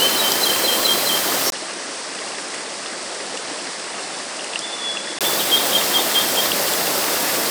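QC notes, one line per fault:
1.50–5.21 s, input switched to a poorer device: 20 ms gap, then duller sound about 10 dB quieter. Spectrogram goes blank above 10.1 kHz over a faint new noise floor, likely a narrower-band microphone.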